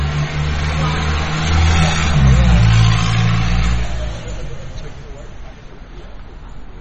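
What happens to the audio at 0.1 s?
At 0.1 s the audio is already under the MP3 compression that runs through the whole clip, most likely from an encoder starved of bits. The damage fits a low bitrate of about 32 kbps. To save data, the encoder has cut everything above 8.2 kHz and dropped weak frequency components that flicker in and out from frame to frame. The result is a dull top end with a watery, swirling texture and softened attacks.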